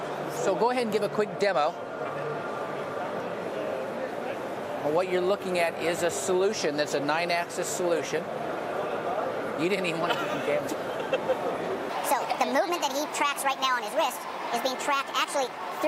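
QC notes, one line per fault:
11.9–15.87 s, section at the wrong speed: from 11.9 s to the end, the audio runs 1.5 times faster than the material before it, so everything sounds hurried and sits roughly seven semitones higher. Tempo and pitch jump together at the boundary rather than drifting. This likely comes from the final section being played out or rendered against the wrong clock, so its samples are consumed faster than they were captured.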